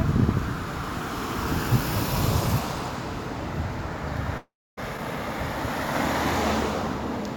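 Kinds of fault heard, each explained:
long network dropout: at 4.37 s the sound turns into a fading, buzzy smear of what came just before, then about 280 ms of near silence. It resumes at 4.79 s with 400 ms missing, likely because the stream stopped arriving.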